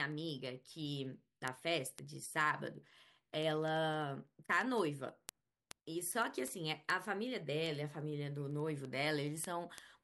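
From 0.12 s right through to 9.95 s there's a steady run of word clock ticks: sharp little clicks, uneven in strength, coming about ten times a second, roughly a hundred in all across the speech. That's the sound of a receiver running on its own clock instead of locking to the sender's, with the two drifting apart by something like 300 ppm. Every time they slip past each other a sample goes missing or gets doubled, and that's each tick you hear.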